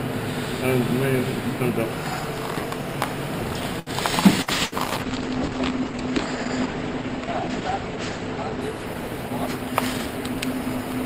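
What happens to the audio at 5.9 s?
At 5.9 s the sound is inside a call bitrate drop that begins at 4.48 s and runs to the end of the clip. The call's bandwidth estimate fell, so the encoder was pushed from 96 kbps down to 11 kbps. It codes far more coarsely now. Its audio band also shrinks from 20 kHz to 8 kHz. The top end goes dull and muffled, with a rough, watery texture. The lowest rate holds for about 3.4 s.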